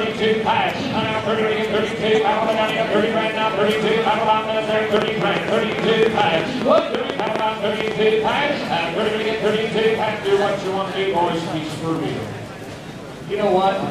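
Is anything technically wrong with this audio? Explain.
Yes. From 4.97 to 7.92 s a train of clicks runs over the sound, about thirty of them at roughly 8.5 per second with uneven spacing. Something is likely injecting short pulses into the signal path, perhaps interference from nearby equipment or a faulty connection or power supply. Each pulse lands about 15 dB above the surrounding audio and has much the same shape, so the result is an irregular ticking or popping laid on top that carries on through the quieter gaps too.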